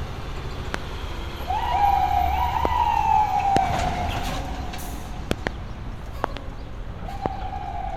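Everyday sound with loud pops at 0.74–0.77, 2.65–2.67, 3.57–3.59 and 7.26–7.28 s, and double pops at 5.31–5.49 and 6.24–6.39 s, each about 20 dB above the sound. They are likely voltage transients, appearing as tall narrow waveform spikes and thin vertical spectrogram lines.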